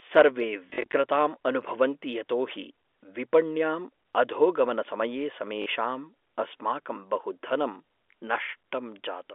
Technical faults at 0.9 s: packet loss with last packet repeated

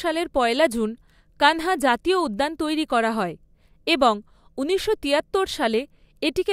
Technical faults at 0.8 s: none

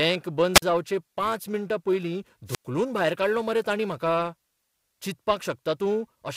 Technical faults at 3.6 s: periodic clock jitter

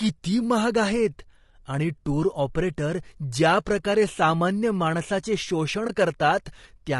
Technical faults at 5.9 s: low-delay AAC compression; AAC frame loss with muting

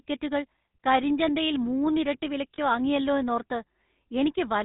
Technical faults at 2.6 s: GSM full-rate codec; lost GSM frames

